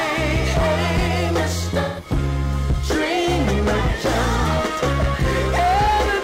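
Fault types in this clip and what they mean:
AAC frame loss with concealment: A short run of compressed frames went missing, and the decoder covered the gap. It rebuilt the sound from the last good spectrum instead of leaving a hole. From 1.80 to 2.08 s the audio turns smeared and noisy, with a phasey, hollow texture. About 170 ms of data is missing, which fits a run of four lost frames. The gap is short, so the patch blurs the sound rather than dropping to silence.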